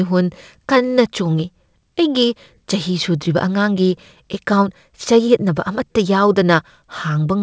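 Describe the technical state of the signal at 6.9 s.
At 6.9 s the speech is still under clock drift between sender and receiver, which runs through the whole clip. The sender's clock runs roughly 4 percent faster than the receiver's, so the jitter buffer keeps overfilling and has to shed material to stay in step. On a spectrogram this never shows as a single event. Instead, the syllable spacing is slightly compressed and uneven, with tiny seams in the harmonic traces wherever audio was dropped.

That moment also falls inside the repeated timing corrections, which run from 0.05 s to 7.19 s at a net speed of 104 percent. The receiver keeps cutting short pieces, always in the same direction and at irregular spacing, so the edits are heard, if at all, as slight hiccups or an unsteady tempo. On a waveform these appear as occasional abrupt joins where a short piece is missing. On the spectrogram they show as brief vertical discontinuities, all confined below the 8 kHz ceiling of the G.722 call path.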